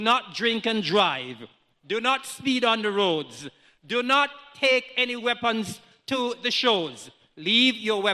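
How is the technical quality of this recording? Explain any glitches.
No audible glitches or faults.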